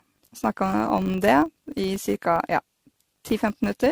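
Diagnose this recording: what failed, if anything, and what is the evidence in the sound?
The codec stage likely suffered generation loss: repeated decoding and re-encoding, around seven passes, each requantising on a shifted frame grid. Throughout, the speech sounds swirly, hollow and smeared, and attacks blur, which points to AAC-LC near 64 kbit/s.

In the processing stage, a filter restarted on every block, losing its state and starting each block from silence. That start-up transient repeats throughout as a 50 Hz buzz that rises and falls with the speech level, which fits 20 ms blocks.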